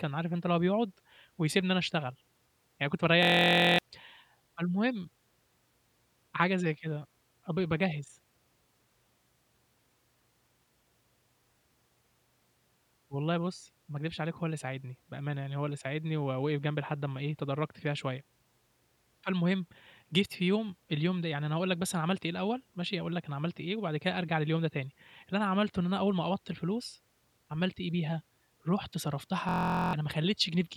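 A steady buzz at about 43 Hz replaces the speech from 3.23 to 3.79 s and again from 29.49 to 29.93 s. This is a system hang loop: the computer or driver froze while the hardware replayed one 23.2 ms slice, which fits a 1024-sample buffer, losing roughly half a second the first time and about 0.4 s the second.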